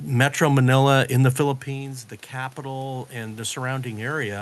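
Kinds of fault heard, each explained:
Automatic gain rising: just after "in the", around 1.5 s, the talker moves back and the level reaching the microphone drops by about 13 dB. From 1.65 s to the end, the gain control responds by raising its gain gradually. Voice and room noise swell together. On a waveform the envelope widens steadily rather than jumping. On a spectrogram the noise floor between syllables brightens in step with the speech bands.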